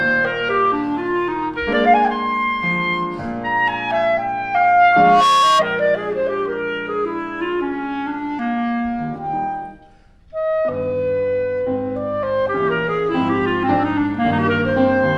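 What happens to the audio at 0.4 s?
Nothing goes wrong at 0.4 s; the audio there plays through intact, with no dropout, click, distortion or other fault.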